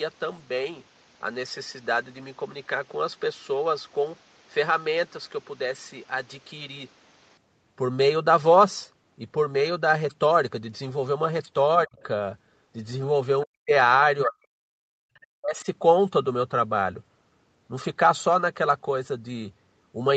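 From 11.84 to 11.98 s the speech drops sharply, roughly 30 dB, which is likely speech suppressed in double talk: the echo canceller mistook overlapping talk for echo and clamped down. Right after, from 11.98 to 12.03 s, a faint scrap of the other side's voice leaks through, probably residual loudspeaker echo the canceller missed. The same ducking returns, deeper, at 13.45 to 13.72, 14.25 to 14.87 and 15.37 to 15.67 s, with another brief, quiet leak at 15.15 to 15.19 s.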